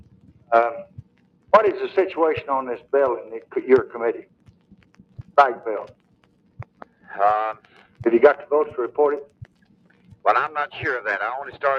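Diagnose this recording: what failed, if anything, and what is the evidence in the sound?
Call processing: a noise suppressor built for speech was left on this sound, and its gain swings by around 20 dB. Held parts pump, showing as a fluttering waveform envelope and broken spectrogram bands.

The noise suppressor cut the sound at 0.0–0.51, 0.85–1.52, 4.22–5.37, 5.88–7.09, 7.55–8.02 and 9.25–10.25 s, dipping by about 16 dB (about 14 dB at 7.55 s). These show as faded, hollowed stretches.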